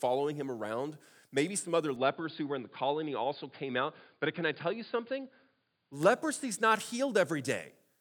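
From 1.96 s to 5.93 s the speech abruptly loses everything above 4.8 kHz and turns dull, then clears again, with no gap and no level jump. A faint new background noise arrives with it, which points to an input likely switched to a poorer device rather than a simple filter.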